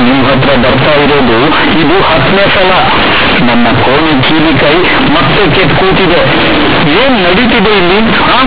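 Speech that comes through as very loud, harsh buzzing distortion from start to finish, with heavy noise filling the pauses where there should be near silence. This is companded audio read as linear: the bytes are A-law, a logarithmic telephone coding at what sounds like an 8 kHz rate, but they are played as plain 8-bit samples with no expansion, so every sign change swings across about half the range and quiet passages become as large as loud ones.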